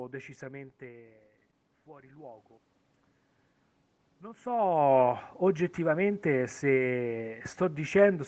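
Automatic gain control rising twice in this speech recording: after the input level dropped by about 17 dB, as when the talker moves back from the microphone around 0.5 s and again near 4.0 s, the gain stage climbed slowly to compensate, by about 3 dB from 1.85 to 2.54 s and about 6 dB from 4.21 to 6.07 s. Voice and room noise swell up together over those spans, with nothing above 8 kHz throughout.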